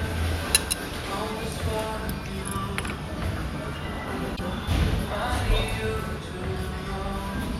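At 4.33 s, lasting about 70 ms until 4.40 s, the audio breaks into a short glitch caused by damaged data in a compressed stream. A stretch of the encoded bitstream was corrupted, so the decoder misread those frames, lost sync and had to hunt for the next valid frame header before resuming. On a spectrogram this shows as a brief vertical smear of broadband or oddly banded energy. The waveform shows a burst with an abrupt resumption.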